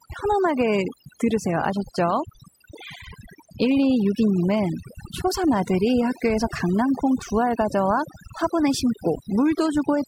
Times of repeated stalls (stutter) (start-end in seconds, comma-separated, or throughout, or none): none